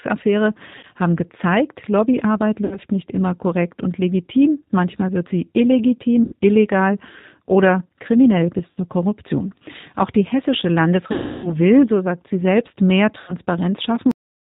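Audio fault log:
throughout: G.729 codec. The speech passes through an 8 kbit/s G.729A coder, and the damage is plainly audible. The coder rebuilds each 10 ms frame from a vocal tract filter, a pitch predictor and a handful of pulses. Everything above 4 kHz is gone, so the sound is dull and boxed in. The sparse pulses leave the voice rough and slightly synthetic.
0.79–0.85 s, 2.65–2.78 s, 6.24–6.33 s, 8.73–8.78 s, 11.12–11.57 s, 13.20–13.34 s: VoIP packet loss concealed by the speech codec. About 40, 60, 80, 60, 320 and 80 ms of audio went missing. The decoder filled each gap by repeating its last pitch and filter at falling gain. That stretches the sound into a fading buzz or coloured noise. The long gap near 11.1 s fades furthest. After each gap the voice stays weak briefly while the decoder recovers.
14.11 s: cut-off end. The audio stops mid-sound at 14.11 s. It falls straight to digital silence with no decay. 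The final stretch of buffered audio was never written out or played.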